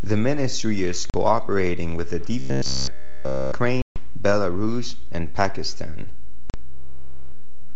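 A DC offset runs through the whole clip. The waveform sits shifted off zero by a constant, which can't be heard as a tone but eats headroom and shows as steady energy at the very bottom of the spectrum. That is what separates it from low rumble, which moves.

At 1.10 s, packet loss on the ADPCM call cuts a hard-edged 40 ms hole, about two packets. Speech then resumes with brief, slight distortion, because the decoder's predictor and step size have lost track of the sender. That recovery smear is what distinguishes it from a clean dropout.

From 2.39 to 3.52 s the audio becomes a rigid metallic buzz at 66.7 Hz that still roughly follows the speech. This robotic sound from repeated short buffers likely comes from a 15 ms chunk being looped while the real audio is skipped. It differs from codec warble because its pitch stays fixed.

At 3.82 to 3.96 s, a longer 140 ms ADPCM loss of several packets follows, with the same slightly distorted return.

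Another 40 ms loss hits at 6.50 s.

From 6.64 to 7.75 s, the 66.7 Hz robotic buzz comes back. Through all of this, the G.722 wideband coding at 64 kbit/s keeps its clear band up to 7 kHz.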